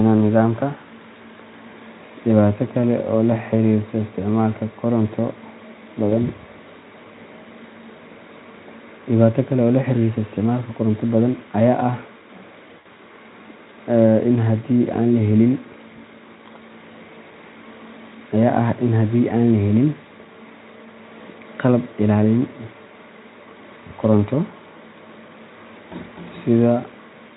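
At 6.09 to 6.12 s and again at 12.79 to 12.87 s, there's VoIP packet loss concealed by the speech codec. The decoder stretches the last pitch and spectral shape into a brief buzzy smear that fades, the first about 20 ms and the second about 60 ms, over clean-sounding Speex.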